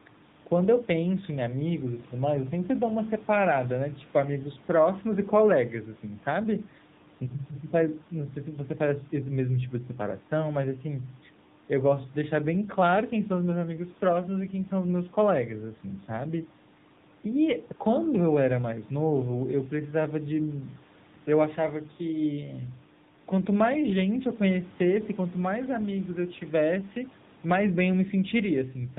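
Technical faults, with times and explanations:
Throughout, AMR narrowband mobile codec: the speech is confined to a telephone band with nothing audible above 4 kHz, which points to 8 kHz sampling. The codec models the vocal tract and drives that model with a small set of pulses per 5 ms subframe. At this bit budget the excitation is coarse, so the speech comes out plainly buzzy and synthetic. That degree of damage fits one of the AMR-NB modes, around 7.95 kbps.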